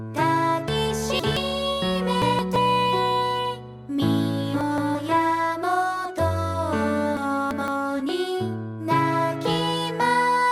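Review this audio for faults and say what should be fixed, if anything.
Chunks out of order at 0.68–1.37 s, 2.22–2.56 s, 4.61–4.95 s and 7.17–7.68 s: 171 ms blocks play one to three places late, jumbling sound, shown as waveform steps and vertical spectrogram seams. Fix it by sequence-numbering buffers and reordering them before playback or writing.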